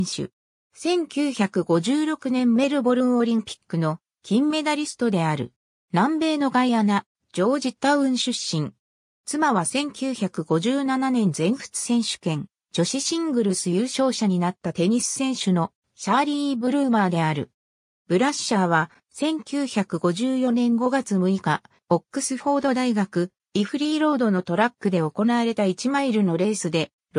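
No technical faults can be heard anywhere in this recording.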